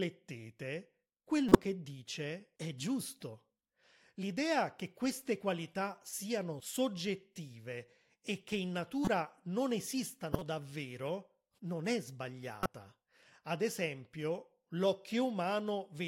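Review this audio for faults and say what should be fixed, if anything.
Corrupt frame decoded at 1.49–1.64 s (before "dice è"), 9.05–9.08 s (after "e che in"), 10.33–10.42 s (before "davvero non è") and 12.63–12.77 s. Each time, the decoder played frames with flipped bits. The misread gains and codes put energy at the wrong frequencies, so the speech is interrupted by short chirpy, noisy bursts. These peak at about −10 dBFS at 1.49 s, about −15 dBFS at 9.05 and 10.33 s, and about −20 dBFS at 12.63 s. Each burst spans a handful of frames. To prevent this, check each frame's integrity before decoding and conceal any that fail instead of playing them.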